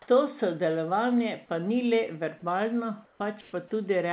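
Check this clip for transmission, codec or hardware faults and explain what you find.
Two brief pauses in this speech have comfort noise in place of the background. The call path carries nothing above 4 kHz, which fits G.711 A-law.

At 3.05–3.2 s and 3.41–3.53 s, the real background gives way to flat, featureless hiss, about 2 dB quieter in the first pause and about 3 dB louder in the second. The likely cause is discontinuous transmission, with the receiver synthesising noise while the sender goes silent. On a spectrogram, the detailed background turns into smooth uniform bands; on the waveform, the two gaps show a slight step in level.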